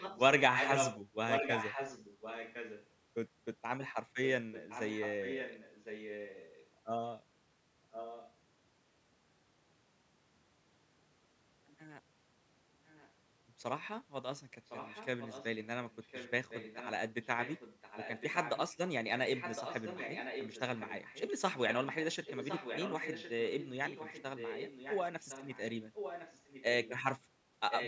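A delayed second copy of the speech trails the talker by about 1.06 s throughout. It is as loud as the speech from 0.0 to 2.87 s, then clearly quieter at 4.25 to 6.66 s, 7.91 to 8.33 s, 14.66 to 18.74 s, 19.34 to 21.22 s and 21.53 to 26.91 s. It is barely audible at 12.86 to 13.12 s and only a little below the speech at 27.7 s to the end. This is an echo leak, likely from a far-end loudspeaker whose echo canceller let the returning sound through.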